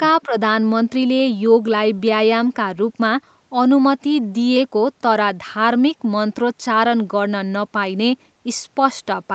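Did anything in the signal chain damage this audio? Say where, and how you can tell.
Yes, in the call processing stage, near the very start. From 0.26 to 0.34 s the speech briefly dips by roughly 10 dB, then recovers, affecting well under a tenth of a second. This is likely speech suppressed in double talk: while the far end was also active, the echo canceller could not separate the near talker from loudspeaker echo and attenuated both. The 8 kHz top end comes from the Opus call path working as designed.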